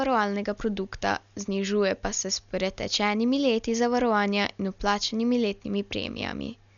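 Speech with heavy codec damage throughout. Nothing is heard above 7 kHz, so it sounds dull. Rough, fluttering noise surrounds the tones. This is likely Dolby Digital compression. Starved lines are filled with dither noise, which fits a low bitrate near 48 kbps.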